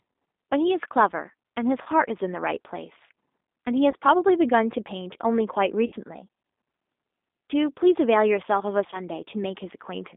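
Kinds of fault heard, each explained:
G.729 codec: an 8 kbit/s speech codec rebuilding the voice from a filter and pulses, leaving rough, synthetic speech; the spectrogram shows energy confined to about 250 Hz to 3.7 kHz.
VoIP packet loss concealed by the speech codec: lost packets near 1.82, 3.91, 5.86 and 8.90 s are filled with fading buzzy or noisy extrapolation, seen as smeared, flattened harmonics and a sagging waveform envelope.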